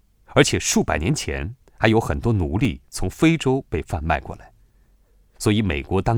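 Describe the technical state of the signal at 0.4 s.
At 0.44 s a 2.9 ms block of digital silence, fitting a 128-sample buffer left unfilled, hard-cuts the speech: a tick, with a brief near-silent gap and vertical broadband click lines.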